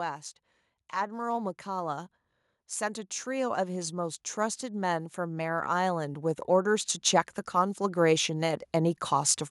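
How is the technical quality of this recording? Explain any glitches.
The recording has two stretches of automatic gain rising. From 2.78 to 6.95 s the level climbs about 9 dB, and from 7.51 to 9.4 s about 4 dB. The gain control is lifting input it judges too quiet, so the voice and the background swell together. That shared, gradual rise is what tells it apart from a talker simply getting louder.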